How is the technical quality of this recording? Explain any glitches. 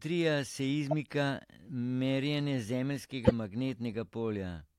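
The recording has two short digital glitches from corrupt frames being decoded. At 0.91 s a blip spans a couple of frames; from 3.25 to 3.32 s a much louder burst hits about three. Damaged bits made the decoder push energy into wrong frequencies.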